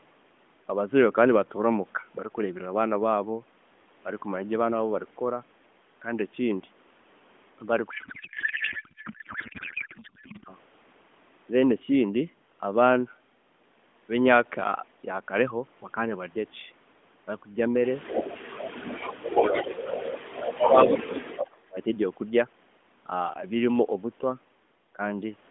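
Codec payload misread, 7.90 to 10.55 s: the speech turns into garbled noise and warble that barely tracks it. The frames appear to be read with their bits packed differently than sent, which points to octet-aligned AMR decoded as bandwidth-efficient.

Echo leak, 18.04 to 18.67 s, 19.29 to 20.99 s and 21.36 to 21.56 s: a delayed copy of the voice arrives about 0.28 s late, at roughly 5 dB below the speech and nearer 10 dB below in the last burst. This is likely residual loudspeaker echo that the loudspeaker side's canceller let through.

Speech suppressed in double talk, 18.67 to 19.67 s, 20.41 to 21.24 s and 21.57 to 21.77 s: the talker's voice dips sharply, by up to around 35 dB, while the echo overlaps it, likely as the canceller turns both the talker and the echo down.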